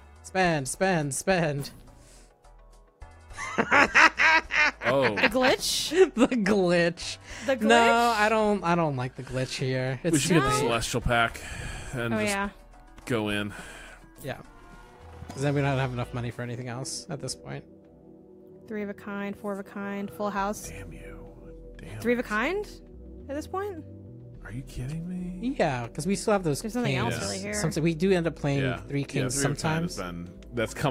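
No technical faults can be heard anywhere in the audio; the signal stays steady and intact throughout.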